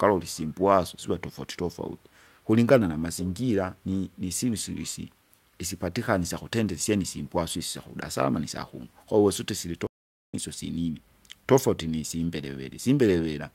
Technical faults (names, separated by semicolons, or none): audio dropout to silence